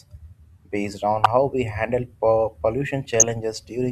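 Speech with two bursts of DAB burbling over the sound at 1.21 to 1.26 s and 3.10 to 3.31 s. Weak reception lets bit errors slip past error correction into the MP2 data, where wrong samples put short blips of noise in single sub-bands.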